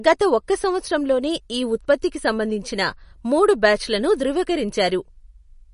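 Speech, with MP3 compression damage plainly audible throughout. Nothing reaches above 10.6 kHz, a hard treble ceiling that fits a low bitrate around 40 kbps, and weaker spectral detail flickers in and out between frames, giving a watery, swirly texture. That flickering sets it apart from a simple low-pass filter, which would dull the top end cleanly without any swirl. The likely cause is an encoder short of bits, discarding what its hearing model rated least important.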